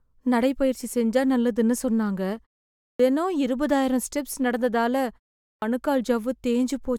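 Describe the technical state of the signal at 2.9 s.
At 2.91 s the speech resumes with a clipped start after a pause. About 84 ms is lost, through 2.99 s. After roughly half a second of silence the output device had gone idle and was still waking when sound returned, so the onset is swallowed and the speech begins abruptly.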